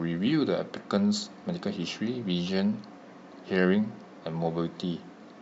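From start to end the speech carries a plainly audible breathy, grainy edge, with the upper spectrum thinned out and partly replaced by noise. The cause is likely Bluetooth LC3 compression working in 10 ms frames, and the damage fits a bitrate near 48 kbps.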